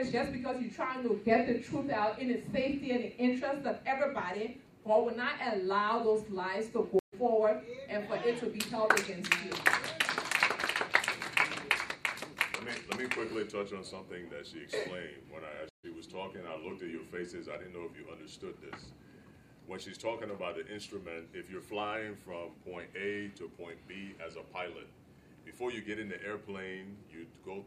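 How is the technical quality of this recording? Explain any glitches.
Two brief dropouts mark the recording. At 6.99 to 7.14 s and 15.69 to 15.85 s, the sound cuts out for about 130 and 140 ms and resumes slightly ahead, skipping roughly a sixth and a fifteenth of a second. That is a stream reconnect: the connection broke, the player reopened the stream mid-flow, and a fresh decoder picked up later material.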